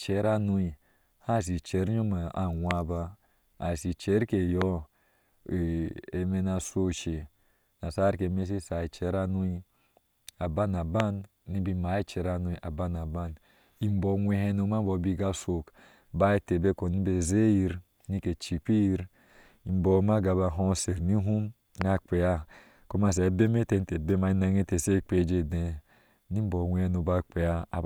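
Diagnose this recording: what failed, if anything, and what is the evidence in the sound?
Four loud pops land at 2.71, 4.62, 11.00 and 21.81 s. Each is one sharp click of about 20 ms, far louder than the speech. The speech continues beneath them. The likely cause is a voltage pulse in the analogue wiring, from a plug, switch or static.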